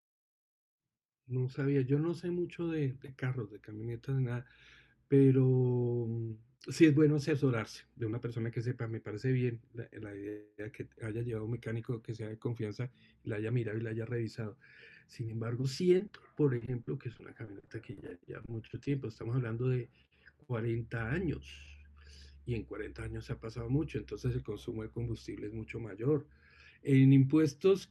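At 15.97 to 16.01 s and again at 16.07 to 16.11 s, short concealed packet loss occurs. Each time about 20 ms of audio failed to arrive and was patched by extending the preceding sound, heard as a brief smear or wobble.

From 16.57 to 18.87 s, repeated packet loss gives a robotic sound. Thirteen gaps, the longest 40 ms, are filled in turn, about 16 percent of the stretch, making it choppy.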